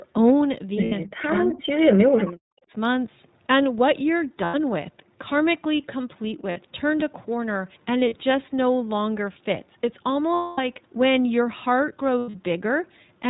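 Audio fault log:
Throughout, iLBC codec: the audio is narrowband with nothing above 4 kHz, and the speech has a plainly audible rough, synthetic edge. Each 20 ms frame's excitation is coded on its own, at a rate that fits 15.2 kbps.
0.84–0.94 s, 4.44–4.55 s, 6.50–6.59 s, 8.00–8.22 s, 10.34–10.60 s, 12.18–12.35 s, lost iLBC frames: gaps of 60 to 240 ms, the longest at 10.34 s, are filled with a repeated pitch cycle blended with noise. This sounds like a held buzzy vowel that fades, and the speech recovers almost immediately afterwards. Around 8.0 s and 12.2 s the losses are scattered, with short runs of about 40 ms and 100 ms.
1.04–2.73 s, speech suppressed in double talk: for roughly one and a half seconds in total, the voice dips and cuts out in pieces, falling by about 40 dB at its deepest. The likely cause is an echo canceller that turned the near talker down while the far side was speaking.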